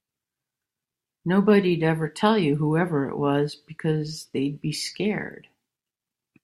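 No technical faults are audible.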